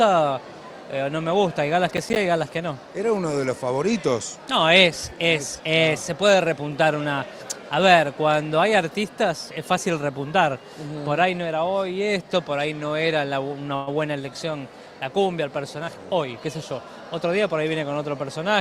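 From 1.97 to 2.16 s there is a burst of processor overload crackle. The processor repeatedly failed to deliver its audio buffers on time. A handful of buffers, each roughly 10 ms, were lost and replaced by silence, so the sound is broken up into gritty, tearing crackle. On a waveform this shows as short flat-line gaps with abrupt, squared-off edges. On a spectrogram it appears as thin vertical stripes: blank slots bordered by broadband clicks where the signal cuts in and out.

Between 13.75 and 13.89 s the audio briefly freezes. The last sound is drawn out into a buzzy, hissing continuation lasting about 116 ms, then the audio picks up exactly where it stopped, with nothing skipped and no true silence. The likely cause is a call audio freeze, in which delayed packets drained the jitter buffer and the receiver filled the wait by extending what it already had. Everything after this point now runs about 116 ms later. 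A spectrogram shows a smeared, held band of the previous spectrum in place of fresh detail, and the waveform shows a repetitive, slowly decaying stretch.

From 15.80 to 16.79 s a jitter buffer speed-up makes the sound run at about 113% speed while keeping the same pitch, so it feels hurried. The receiver had built up excess buffered audio and cut it back by removing many short pitch-period-sized pieces, about 150 ms in total. On a spectrogram the harmonics stay at the same frequencies but events sit closer together in time. The waveform contains many small, closely spaced splices.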